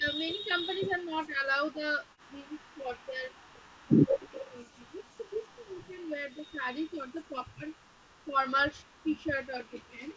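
Speech suppressed in double talk runs from 0.0 to 3.62 s and again from 4.02 to 7.72 s. The talker's level repeatedly sinks by up to about 20 dB, then about 25 dB, with roughly two and then three seconds lost in pieces. This is likely an echo canceller that could not tell this voice from loudspeaker echo while the far side spoke, so it ducked both.

An echo leak sits inside that second stretch, from 4.2 to 4.46 s. A faint copy of the voice returns 150 ms late at about 20 dB below the speech, likely because a loudspeaker's echo slipped past an echo canceller and was sent back.

Speech suppressed in double talk returns briefly from 8.24 to 8.39 s, a dip of about 20 dB, and again from 8.73 to 10.17 s, where about a second of the sound drops by up to about 15 dB. This is likely the same double-talk ducking.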